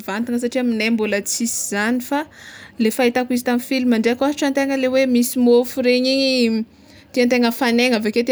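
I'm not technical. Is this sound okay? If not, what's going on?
Yes, no technical faults are audible anywhere in this recording.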